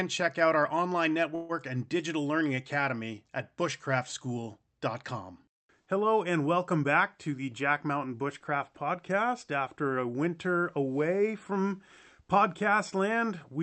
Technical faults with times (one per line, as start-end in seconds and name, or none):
1.35-1.52 call audio freeze